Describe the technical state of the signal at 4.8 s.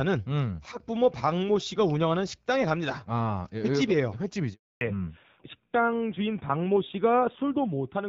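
At 4.8 s the call is in a handover gap: during a network switch no speech frames arrived from 4.53 to 4.81 s, so the sound dies away and stays silent for 280 ms. As the new link starts at 4.81 s, a fallback to narrowband begins. The call has dropped from HD Voice to an older narrowband codec, so everything above 4 kHz is gone and the sound becomes duller and rougher until the end.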